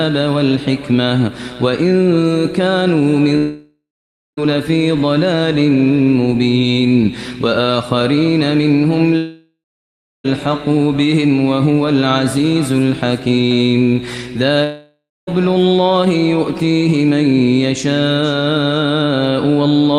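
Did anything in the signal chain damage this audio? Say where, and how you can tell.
Yes. There are three long network dropouts, at 3.37 to 4.39 s, 9.17 to 10.26 s and 14.64 to 15.29 s. In each one, the last sound is drawn out into a buzz that fades, then goes silent for 0.53 s, 0.66 s and 0.24 s respectively. The audio resumes further along, with 1.0 s, 1.08 s and 0.64 s of material missing. The stage is likely the network. Packets stopped arriving, the receiver's concealment extended the last sound until it gave up, and playback then jumped ahead to current audio.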